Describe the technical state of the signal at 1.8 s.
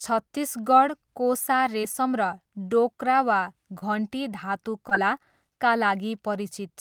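Right around 1.81 to 1.85 s, just after "छत्तिसगढ 'कोसा", there's a short concealed packet loss. About 20 ms of the speech didn't arrive at the decoder in time, and the receiver papered over roughly 14 ms of that gap by extending the preceding sound, then cross-fading back into the real signal. What you hear is a quick smear or brief wobble there.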